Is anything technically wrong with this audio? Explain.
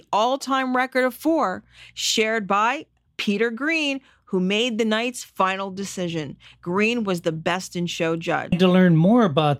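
Yes. Compressed frames are skipped at 8.52 s: about fifteen frames of roughly 26.1 ms each were never decoded, so the speech jumps ahead by about 0.3 s. Because adjacent frames overlap, the join is a brief smeared blip rather than a sharp click.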